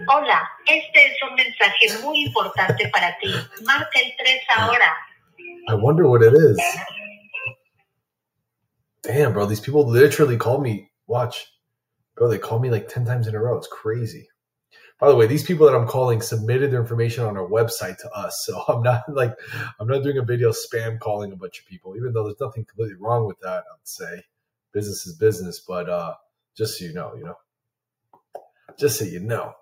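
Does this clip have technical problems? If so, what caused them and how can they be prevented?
Yes. Between 5.07 and 5.39 s the sound briefly dips, sinking by up to about 12 dB across roughly 150 ms in total, as though it were momentarily pulled away. This is sound cut by the noise suppressor: the suppressor misjudged this stretch of wanted audio as noise and attenuated it harder than the surrounding material. Lowering the suppressor's strength, or lowering its threshold so that it acts only on genuine background noise, would prevent it.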